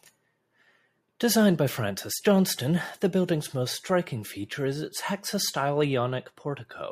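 No technical faults occur anywhere in the recording, so there is nothing to describe in time order.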